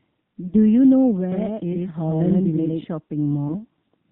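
Across the whole clip the speech carries plainly audible AMR narrowband mobile codec damage, with nothing above 4 kHz and a buzzy, synthetic edge to the voice. The 4 kHz band limit and the degree of coarseness fit the low 7.4 kbps AMR-NB mode.

From 0.48 to 0.55 s there are lost AMR speech frames. The decoder filled the gap by repeating its last good pitch and vocal tract settings at falling gain, giving a short warbling dip. The gap fits two missing 20 ms frames. A second, smaller dropout from 3.48 to 3.56 s fits a single lost frame.

Between 1.32 and 2.84 s there is a doubled audio track. A second full-band copy of the speech runs about a tenth of a second behind, at roughly the same level, with no decay or room colour. It starts and stops abruptly. The likely cause is a second capture through a slower path.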